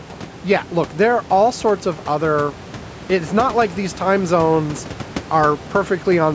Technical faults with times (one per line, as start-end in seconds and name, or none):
none